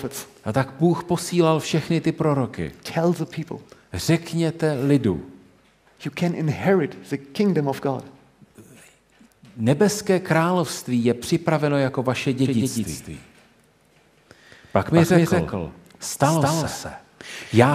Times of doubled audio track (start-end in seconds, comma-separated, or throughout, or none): 12.45-17.74